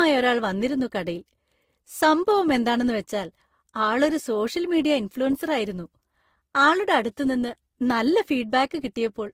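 Throughout the speech, nothing is heard above 16.6 kHz. Two distinct sets of codec artefacts sound together. The cause is likely transcoding between lossy codecs, which fits a low-bitrate Opus encode later re-encoded as Vorbis. The second codec re-coded the first one's damage and added its own.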